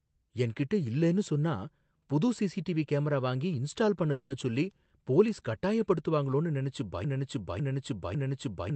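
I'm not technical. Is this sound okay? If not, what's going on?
No. At 4.11 to 4.32 s, right after "சிசிடிவி கேமரா வாங்கி இன்ஸ்டால்", there is a call audio freeze: a brief 0.19 s buzzy stretch, likely from delayed packets. Speech resumes at "சொல்லி போலீஸ்" with nothing lost.

From 7.04 s to the end, a broken-record loop repeats the same 0.55 s piece over and over, likely because the stream stalled. Whatever should have been said there is gone.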